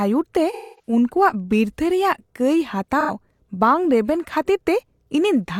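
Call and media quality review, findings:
AAC frame loss with concealment, 0.52–0.93 s. Smeared, noisy patch. The decoder rebuilt about 256 ms from the last good spectrum, which fits roughly six lost frames. Recurs 2.99–3.13 s, between "ᱵᱤᱨᱛᱷᱟᱹ ᱨᱮᱭᱟᱜ ᱠᱟᱹᱭ" and "ᱵᱟᱝ ᱨᱮᱵᱮᱱ ᱠᱷᱟᱹᱛᱤᱨ". Shorter phasey blur, 85 ms, consistent with two frames.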